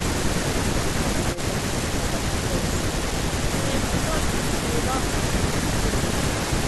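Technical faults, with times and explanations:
1.35–1.46 s and 4.43–4.52 s, speech suppressed in double talk: the speech dips sharply for a moment, by roughly 10 dB in the first spot and nearer 15 dB in the second. Each lasts about a tenth of a second or less. The likely cause is an echo canceller that heard both ends talking at once, mistook this talker's speech for loudspeaker echo, and turned it down along with the echo.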